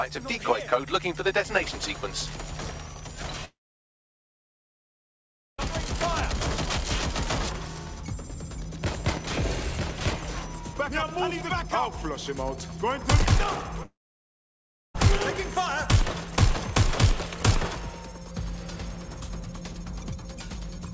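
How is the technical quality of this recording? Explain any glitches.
Two gaps interrupt the recording, plus one very short concealed loss just before the second gap. The audio passed through a G.722 call path at 64 kbps, so nothing above 8 kHz is present.

Long network dropout, 3.45 to 5.59 s and 13.86 to 14.95 s: the sound stops for about 2.1 s and then about 1.1 s. Each gap opens with a brief continuation of the preceding sound that dies away, then silence for almost the whole stretch (about 2.06 s and 1.02 s). The likely cause is that packets stopped arriving, so the receiver extended what it last had and then fell quiet. The audio resumes later with the missing portion gone.

Short concealed packet loss, 13.83 to 13.86 s: a fragment of about 10 ms never reached the decoder in time. The receiver covered it by extending the last sound, continuing the pitch if the sound was voiced and using shaped noise if not, then crossfaded back into the real signal. 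The result is a brief smear lasting a couple of hundredths of a second. Here it leads directly into the second dropout.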